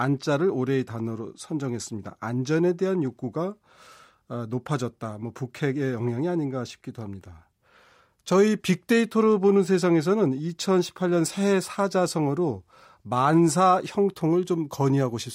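No technical faults can be heard in the recording.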